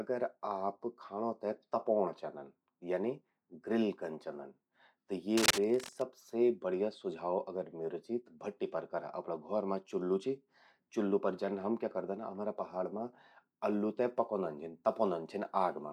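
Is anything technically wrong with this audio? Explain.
Yes, there's a stretch of cable scratch noise from about 5.34 to 6.03 s, about 0.7 s of dense, ragged crackle and rustle sitting right on top of the speech, roughly as loud as the talker. That uneven, gritty texture is the giveaway: it's likely a worn cable, connector or control being jostled, so the contact resistance flickers rapidly and injects those irregular bursts of noise straight into the signal path.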